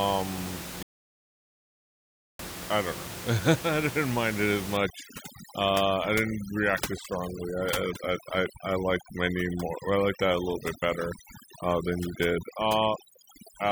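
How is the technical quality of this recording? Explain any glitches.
The recording has two clear technical problems, one early gap and one lasting processing fault, heard over room noise sitting only about 10 dB below the speech.

Audio dropout to silence, 0.83 to 2.39 s: the input was likely lost for about 1.56 s, with silence written instead, so the speech cuts to dead, toneless silence and that stretch is gone.

Overdone noise removal, from 4.77 s to the end: an over-aggressive noise reducer switches off frequency bands near its noise estimate, leaving twinkling specks in a lowered background and taking quiet parts of the voice with them.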